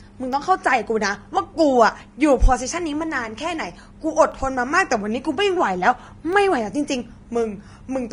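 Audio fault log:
throughout: Vorbis compression, likely the cause of the plainly audible hiss and graininess. Nothing remains above 10.6 kHz, and the treble is quantised so coarsely that fine detail turns to noise, roughening the speech and blurring its onsets, which fits a bitrate around 33 kbps.
0.33, 2.33, 4.33, 6.33: periodic USB or driver dropouts, every 2.0 s. Each time a fraction of a millisecond of audio is replaced by silence, as the bus or driver stalls briefly, leaving a regular tick in the sound.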